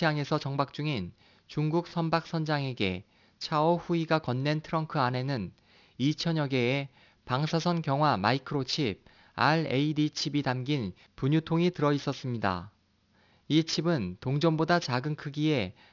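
This speech clip has aliasing throughout. Sibilants sound gritty and metallic. The spectrum runs hard up to a 6 kHz edge. Energy above that folds back to unrelated frequencies, roughly 20 dB below the speech. This fits a drop to 12 kHz sampling without an anti-aliasing filter.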